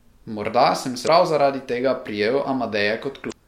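At 1.03 to 1.08 s, just before "prav zaradi tega", a short chirp, squawk, click or hole cuts through. Another follows at 3.28 to 3.33 s. Both come from damaged data in the compressed stream, which makes the decoder lose frame sync.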